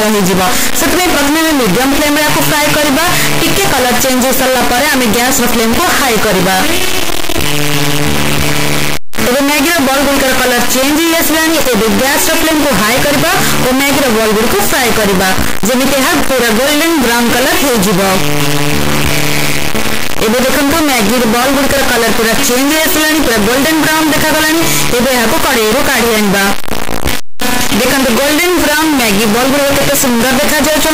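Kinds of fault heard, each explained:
Signed and unsigned mixed up: the 8-bit samples were likely read with the wrong sign convention, so the top bit of every value is flipped and each pass through zero jumps to the opposite end of the range. From start to finish this gives very loud, harsh distortion, and soft sounds come out just as loud as the rest.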